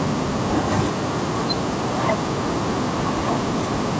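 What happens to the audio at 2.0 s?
From 1.97 to 2.08 s the speech is pulled down sharply, about 40 dB at its deepest, for roughly a tenth of a second, then recovers. This is speech suppressed in double talk, likely caused by an echo canceller that could not tell the near talker from loudspeaker echo while both sides spoke, so it turned everything down. Unlike a packet-loss dropout, the level is ducked by gain reduction rather than replaced by a hard gap.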